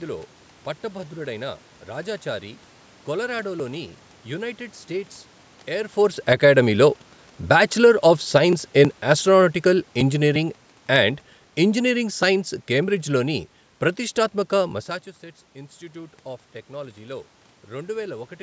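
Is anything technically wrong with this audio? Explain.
Yes. From 8.77 to 13.44 s the automatic gain control judged the input too loud or its background noise too strong and gradually pulled its gain down by about 6 dB, so the speech and its room background sink together, settling lower just before "ప్రతిష్ఠాత్మక మస్సాచుసెట్స్ ఇన్స్టిట్యూట్ ఆఫ్".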